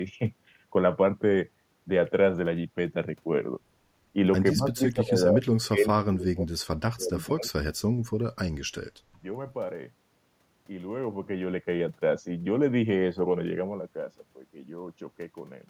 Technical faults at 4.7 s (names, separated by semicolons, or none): speech suppressed in double talk